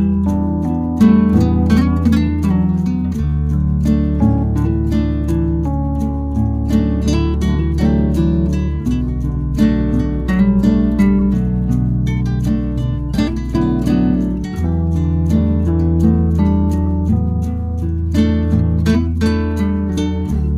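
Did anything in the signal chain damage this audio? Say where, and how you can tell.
Yes. At the codec stage, a loud blip at 11.19 s and a fainter chirp from 16.85 to 16.89 s are corrupt frames decoded with wrong spectral energy.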